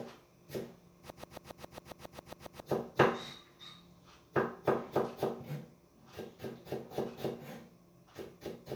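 From 1.10 s to 2.62 s the everyday sound turns into a broken-record loop: a 136 ms fragment plays back to back eleven times, identical each pass, before normal audio resumes. The likely cause is a stalled player, encoder or stream that kept resending its last held fragment, so the sound that belonged in that stretch is lost. Unlike an echo, the repeats don't fade, and unlike a dropout, there is no gap.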